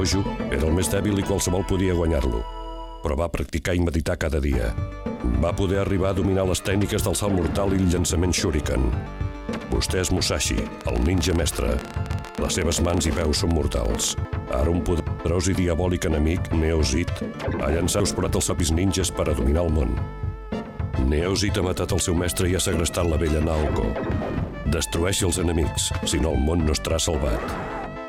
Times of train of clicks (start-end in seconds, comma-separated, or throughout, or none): 10.81-14.12